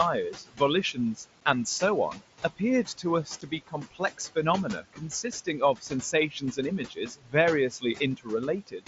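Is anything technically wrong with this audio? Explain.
Yes. There are three faults in this speech clip.

Noise suppressor artifacts run through the whole clip. The suppressor treats the steady background as noise and pulls it down by about 16 dB, frame by frame. The room noise sits about 14 dB below the speech. So it dips between phrases and swells back under them.

Speech cut by the noise suppressor happens six times: 0.34 to 0.61 s, 2.13 to 4.36 s, 4.82 to 6.58 s, 6.89 to 7.34 s, 7.70 to 8.28 s, and 8.67 to 8.87 s. Only parts of each span suffer, a few hundred milliseconds at most. The suppressor mistakes soft speech for noise and turns it down by about 16 to 18 dB. Quiet consonants and word endings sound swallowed or faint.

Unconcealed Bluetooth headset packet loss occurs at 1.41 s and 3.41 s. Each gap lasts 7.5 ms, which fits a single lost packet on the link between headset and phone. 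Nothing fills the gap smoothly. The speech drops out with hard edges.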